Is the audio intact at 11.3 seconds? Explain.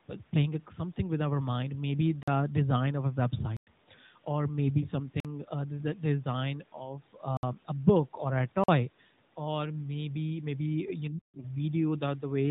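No. From 11.1 to 11.45 s the speech is turned down sharply, falling by about 40 dB at its deepest before recovering, which sounds like the talker abruptly dropping away. This is speech suppressed in double talk, likely an echo canceller that mistook the near talker for loudspeaker echo while both sides spoke and attenuated everything. On a waveform the envelope collapses to a thin trace for under half a second; on a spectrogram the energy fades across the band, leaving a near-empty gap.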